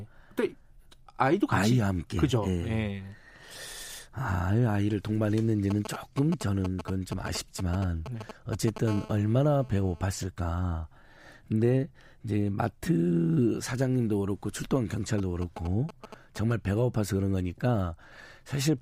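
From 5.70 to 8.78 s there are GSM signalling bursts: a 2G handset somewhere close is sending short clusters of radio pulses at 217 Hz, and something in the audio chain is rectifying them into the speech. You hear that galloping dit-dit-dit of short raspy 217 Hz buzzes, sitting roughly 10 dB under the speech. The same pattern comes back from 15.18 to 16.53 s, a bit quieter, maybe 15 dB down.

Right after the first stretch, from 8.88 to 10.04 s, it turns into a proper GSM phone buzz. The handset has gone into continuous call-style transmission, so the 217 Hz pulsing is steady. The rectified result is a hard, harmonic-rich buzz at 217 Hz that has nothing to do with the speech. It sits about 19 dB below the speech, lower than the signalling bursts around it and nearly steady while it lasts.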